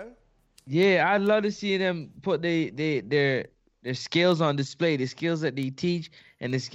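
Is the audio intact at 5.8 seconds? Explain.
No, 5.8 seconds sits inside a run of word clock ticks from 0.39 to 6.50 s. Sharp clicks land at a steady pace of about one every 0.4 s, some louder than others. What's going on is a digital link read by a device on its own clock, drifting against the sender by something like 50 parts per million, so each time the two clocks slip, a sample gets dropped or repeated and the speech picks up a tick.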